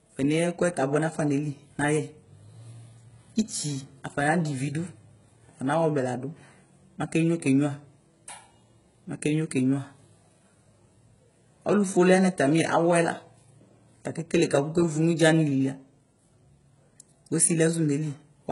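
From start to finish the speech has a bright but synthetic top end, with s sounds turning gritty and lispy and nothing above 11 kHz. This points to heavy HE-AAC compression, likely at a very low bitrate around 12 kbps, where copied, loosely shaped treble stands in for the real harmonics.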